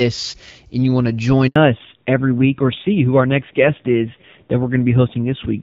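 A speech recording carried over a mobile voice call. At 1.48 s a handover gap cuts the audio to silence for 80 ms, until 1.56 s. The call was switching networks, no speech frames arrived during the switch, and whatever was said in that interval is simply missing. From 1.56 s to the end there is a fallback to narrowband. Before the gap the audio has the fuller wideband sound of AMR-WB, consistent with around 12.65 kbit/s. After it, nothing is present above 4 kHz, and the speech is duller and rougher, which fits a drop to AMR-NB at about 5.9 kbit/s.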